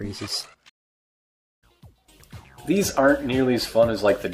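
At 0.69 s a stream reconnect occurs. Sound drops out for 850 ms. Playback resumes near 1.63 s, skipping ahead roughly 0.7 s.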